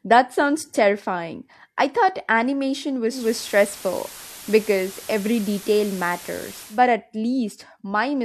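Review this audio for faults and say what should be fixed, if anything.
At 3.09 s, right after "terrifying I thought animation", the speech shows digital radio blending to analogue. The receiver lost the digital stream and cross-faded over about 0.21 s to the station's FM broadcast. FM hiss rises to roughly 20 dB below the speech and the level shifts by about 2 dB. At 6.82 s it blends back to digital. The fix is a stronger digital signal, via better antenna placement or a receiver with blending disabled.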